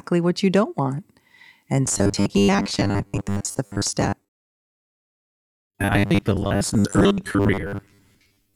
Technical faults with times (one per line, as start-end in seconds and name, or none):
1.86-8.56 robotic sound from repeated short buffers